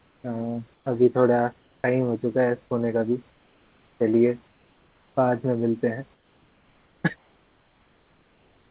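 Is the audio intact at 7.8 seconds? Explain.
No. From 7.16 to 8.71 s, the room's real background gives way to comfort noise, a steady, featureless hiss about 2 dB quieter. The likely cause is that the sender stopped transmitting during the speech pause, leaving the receiver to synthesise roughly matching noise.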